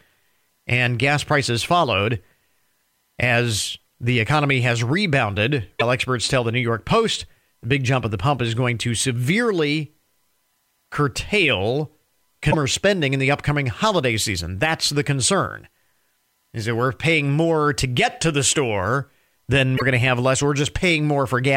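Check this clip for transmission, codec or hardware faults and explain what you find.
Three short glitches point to a broken MP3 bit reservoir. Frames were likely dropped, so following frames read borrowed bits from the wrong frame and decode garbage. Speech skips ahead with a brief chirp, noise burst or short hole at 5.79–5.82 s (after "the economy has rebounded", before "experts tell the"), 12.50–12.55 s (before "spending in the upcoming"), and 19.76–19.82 s. Each glitch spans one or two frames, which fits 26.1 ms MP3 frames.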